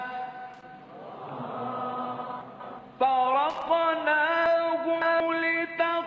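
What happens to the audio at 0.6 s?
At 0.6 s there is a loose connector crackle, running from about 0.54 to 0.66 s. A worn or dirty contact is making and breaking intermittently as it shifts, so the signal is chopped on and off in rapid, uneven succession, and any DC present on the line turns each transition into a pop. The result is a short, irregular burst of scratchy crackle sitting on top of the band-limited call audio, which has nothing above 8 kHz.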